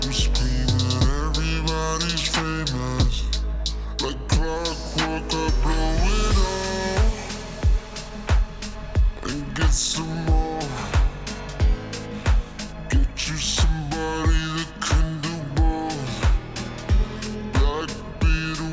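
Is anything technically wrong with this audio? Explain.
Yes. The whole clip has a wrong sample rate problem. It's being played back at roughly 16 kHz when it was captured at about 22 kHz, and nothing resampled it in between. Because the samples just get clocked out slower, everything runs at about 0.73 times normal speed and drops roughly 5.5 semitones in pitch, together. So it comes across as sluggish and noticeably low, sort of dragged down, from start to finish.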